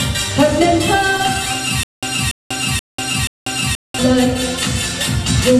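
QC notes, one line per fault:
1.83–3.99 s, stutter with silent gaps: the same short burst of sound, about 287 ms long, plays four times at a steady pace of one every 479 ms, each followed by roughly 192 ms of dead digital silence. This points to a playback or streaming stall, likely with the player re-issuing its last buffered fragment at each retry and then running dry. The audio that should have filled this stretch never arrives and is lost.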